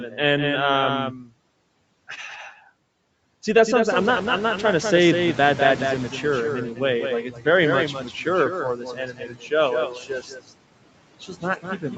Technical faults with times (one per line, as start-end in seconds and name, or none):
0.00-11.98 doubled audio track
0.00-11.98 noise suppressor artifacts
1.18-1.30 speech cut by the noise suppressor
3.90-6.66 noise suppressor catching up
7.23-7.46 speech cut by the noise suppressor
7.93-8.27 speech cut by the noise suppressor
8.76-9.52 speech cut by the noise suppressor
9.89-10.53 speech cut by the noise suppressor
11.20-11.98 speech cut by the noise suppressor